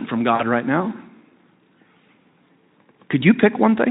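From 0.35 to 0.44 s, just before "right now", VoIP packet loss concealment fills a roughly 40 ms gap, which fits two lost 20 ms frames: the Speex decoder stretches its last pitch and filter into a fading buzz or coloured noise. On a spectrogram, harmonics smear flat; the waveform envelope decays, then recovers weakly.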